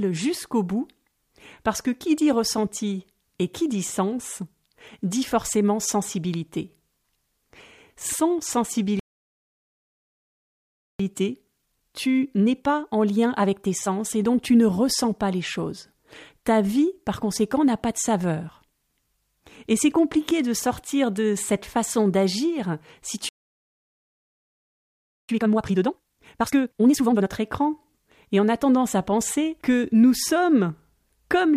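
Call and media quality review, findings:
Playback stall: speech cuts dead mid-flow, 9.00–11.00 s and 23.29–25.29 s (after "cette façon d'agir si"), 2 s each. Likely output buffer underrun or blocked player thread. Full silence with no fade, unlike a gain dip.

Time-compressed catch-up: hurried speech after each stall, 11.00–14.00 s at 1.15x (into "et donc tu ne") and 25.29–27.29 s at 2x (into "écran et on a"). Player splicing out backlog. Pitch stays put, unlike a rate mismatch.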